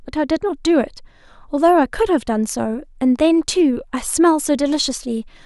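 Listening to the speech recording, nothing stood out as a technical fault at any point.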